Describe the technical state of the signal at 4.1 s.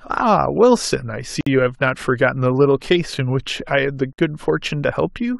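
A gap at a join of encoded pieces opens from 4.13 to 4.18 s: a 53.5 ms gap where separately encoded speech was spliced with encoder delay and padding left in. Unlike a dropout, the speech resumes exactly where it stopped, with smeared edges.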